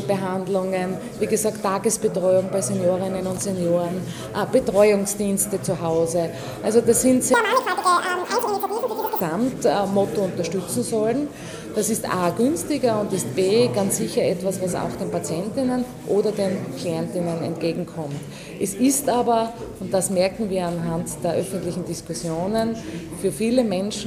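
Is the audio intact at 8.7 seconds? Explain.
No. From 7.34 to 9.21 s the audio is read two samples at a time, so pairs collapse into single frames, running at double speed and an octave higher.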